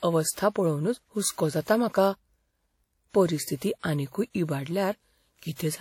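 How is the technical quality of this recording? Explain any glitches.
Technical quality is held back by one fault that runs through the whole speech recording: audible WMA compression. From start to finish, the sound has a ringing, washy character, with a hiss that swells and falls along with the speech. This is likely from a simple transform encoder such as WMA version 1 running at a low bitrate, which fits roughly 48 kbps. Long transform blocks smear quantisation noise across tens of milliseconds around each sound, and weak spectral lines are dropped entirely. Nothing is present above 18.1 kHz.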